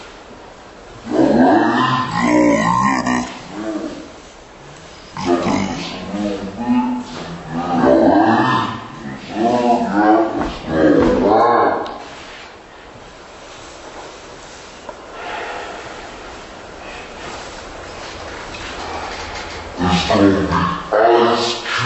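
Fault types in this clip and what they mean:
Wrong sample rate: The sound runs at half speed and a full octave lower throughout. That fits 44.1 kHz audio played back near 22 kHz.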